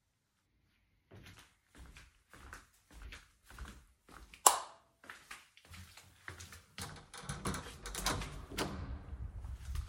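Nothing in the recording stood out as a technical problem on listening.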